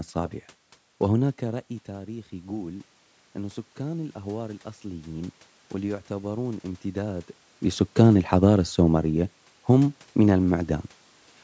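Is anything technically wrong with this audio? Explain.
Yes. From 1.47 to 7.36 s, automatic gain rising: the input fell by about 13 dB as the talker moved back, and the gain control slowly added about 8 dB to compensate. The speech and the room noise behind it swell together over those six seconds.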